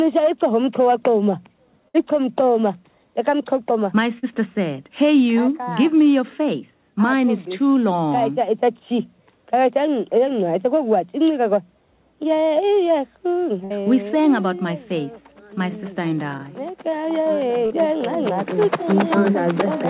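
At 1.88 s, 4.18 s and 13.64 s, a burst of packet loss hits. The receiver stretches the last sound into a fading buzz or hiss for about 50 to 60 ms, then skips ahead. On a spectrogram, flat smeared bands taper off, and the waveform jumps abruptly where the lost stretch is missing.

At 17.66 s, a short concealed packet loss fills about 40 ms with extrapolated sound, heard as a brief smear. It looks like a small, blurred, repeated patch blending back into the real waveform.

Throughout, the spectrogram is empty above 4 kHz, which fits a G.711 mu-law call path.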